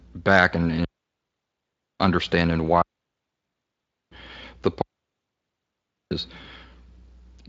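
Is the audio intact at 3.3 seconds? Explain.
No. At 3.3 seconds the clip is inside a digital wireless dropout that runs from 2.82 to 4.12 s. The radio link lost too much data to keep decoding, so the receiver muted its output rather than play corrupted audio, fading down very quickly and holding the mute for 1.3 s. The result is a clean hole of near silence in the speech, with no crackle or noise burst at either edge.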